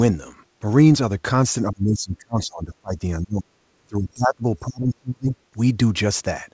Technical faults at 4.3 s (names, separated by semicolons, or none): speech suppressed in double talk